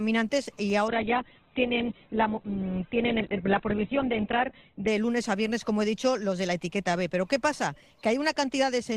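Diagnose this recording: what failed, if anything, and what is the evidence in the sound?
What failed is at the network and codec stage: an adaptive stream at a lower bitrate. From 0.88 s to 4.88 s the sound suddenly degrades, with more codec smearing, then snaps back with no gap either side. The connection evidently slowed, so the player switched to a much leaner encoding for those four seconds, which fits a step down from about 64 kbit/s to 8 kbit/s Opus.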